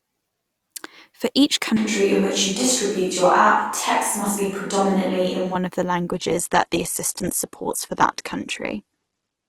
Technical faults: switch to a distant microphone; adaptive stream at a lower bitrate

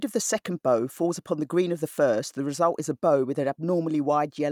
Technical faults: none

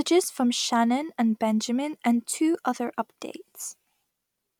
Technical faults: none

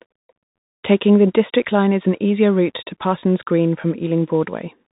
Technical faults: Bluetooth CVSD headset codec

